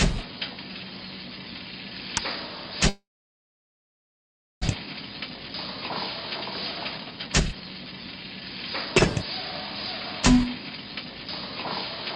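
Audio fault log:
2.89–4.69 s, long network dropout. The sound stops being fed. The last sound is drawn out as a buzzy tail that fades within a few tenths of a second. About 1.6 s of silence or faint steady noise follows. The audio returns at 4.69 s, but about 1 s of it is simply gone. The likely cause is a network stall where packets stopped arriving. The delay then jumped by roughly 0.7 s.
4.79–5.90 s, 6.98–8.93 s and 10.34–11.47 s, jitter buffer speed-up. The buffer is holding more audio than it wants after the stall. The receiver trims many tiny pitch-period slices to catch up. Pitch stays the same, but the sound runs fast and feels hurried. The first and last stretches play at 107% and 108%, each shedding around a tenth of a second. The middle stretch is the most rushed, at 123%, and drops about half a second.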